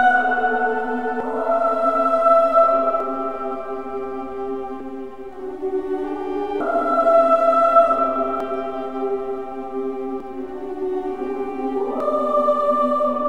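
The sound jumps forward at 1.20, 3.00, 4.80, 6.60, 8.40, 10.20 and 12.00 s, each skip dropping about a fifth of a second. This is likely audio missing between chunks from 2 s processing blocks. Unlike dropouts, it leaves no silent gap, and the skips recur at a steady 1.8 s interval.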